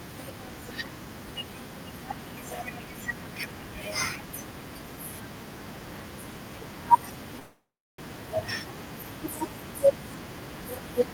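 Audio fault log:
7.39–8.00 s, call audio freeze: sound smears, then falls silent for 0.34 s, likely a drained jitter buffer; speech resumes intact, 0.59 s late.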